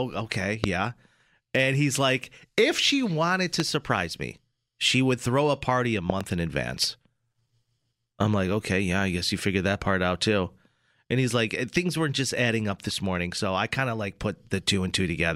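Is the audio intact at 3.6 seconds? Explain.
No. A loud pop hits at 3.60–3.62 s, after "like if she wanted", well above the speech, likely from a voltage spike in the signal chain.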